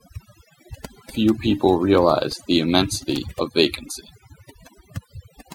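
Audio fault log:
Throughout: overdone noise removal. The denoiser was pushed too hard on this speech, so any frequency band that sat close to its guess of the noise got pulled way down or switched off entirely. That's why the gaps sound near silent with little twinkling specks where stray bands flicker in and out, and why the voice's quieter detail got thrown out along with the noise.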